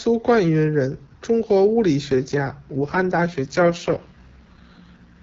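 Right after "中国物理", at about 2.05 s, there's an AMR rate drop: the speech turns rough and synthetic through to the end, which fits AMR-WB stepping down from 12.65 to 6.6 kbit/s.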